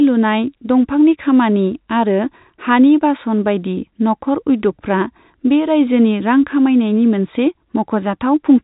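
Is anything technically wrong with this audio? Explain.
No, nothing is technically wrong: the speech carries the band limit of ordinary G.711 telephone coding, with nothing above about 3.8 kHz, and that is simply the normal sound of a fixed-line telephone path.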